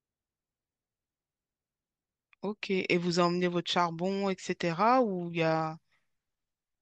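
Nothing stood out on listening to this speech clip.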